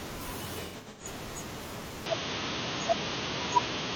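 A speech recording with two separate faults. From 0.63 to 1.06 s there is AAC frame loss with concealment: about 256 ms of audio is missing, scattered across roughly 340 ms, which fits around six lost frames. The longest single gap is about a tenth of a second. The decoder patches each gap by reusing the last intact spectrum with altered phase or estimated energy, so the passage sounds smeared and noisy rather than cutting to silence. From 2.06 s to the end, the bandwidth abruptly narrows, with nothing above 6.5 kHz, and the tone turns duller and boxier. The level shifts by about 5 dB and a new noise floor appears around 40 dB below the signal, with no gap at the transition. This points to the input likely being switched to a poorer device partway through the recording.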